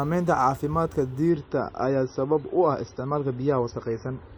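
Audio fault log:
1.30–4.37 s, adaptive stream at a lower bitrate: the speech abruptly loses everything above 6 kHz and turns dull and smeary, with no gap at the switch. The player dropped to a far leaner encode, which fits an MP3 of about 24 kbit/s replacing one near 128 kbit/s.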